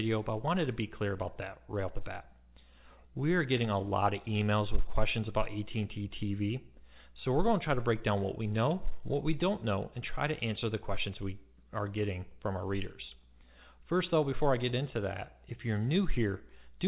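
No faults found; the audio carries the narrowband sound of a call path, with nothing above 4 kHz, which fits G.711 A-law at 64 kbps.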